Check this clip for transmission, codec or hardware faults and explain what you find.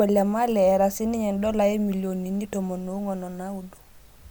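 No transmission, codec or hardware faults can be heard.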